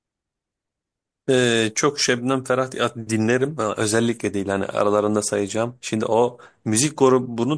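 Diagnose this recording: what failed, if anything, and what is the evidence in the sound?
Nothing failed here: listening through the speech, there's no point in any stage from the wiring to playback where the sound breaks, distorts or goes wrong.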